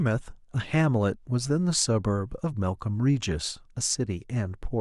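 No technical faults can be heard anywhere in the recording. There is nothing in the signal that calls for comment.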